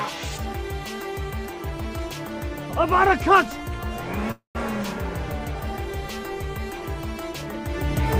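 A call audio freeze runs from 4.31 to 4.57 s: the last sound smears into a fading buzz, then about 140 ms of silence, before the audio resumes exactly where it stopped. The likely cause is delayed packets draining the jitter buffer, which adds a 235 ms gap but loses nothing.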